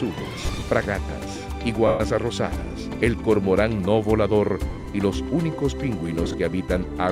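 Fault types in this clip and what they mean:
lost LE Audio frames: at 0.36–0.62, 1.87–2.0, 4.70–4.86 and 6.24–6.34 s, the LC3 decoder fills gaps by repeating the last spectrum with random signs, leaving noisy smears.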